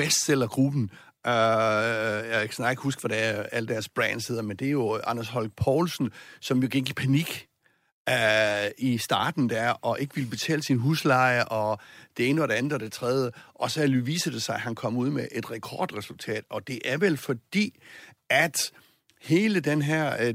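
Throughout the speech, sample clock jitter adds a faint grainy hiss that rides on the voice. The converter's timing wanders by around a microsecond, so each sample lands slightly off its proper instant, and the resulting error sits roughly 40 dB below the signal. It swells on loud, bright syllables and sibilants, then drops away in pauses. A spectrogram shows a diffuse noise haze, strongest at high frequencies, appearing only under speech energy.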